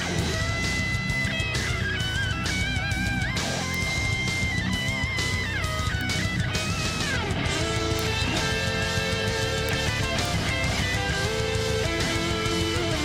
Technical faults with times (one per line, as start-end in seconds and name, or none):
0.35-12.80 word clock ticks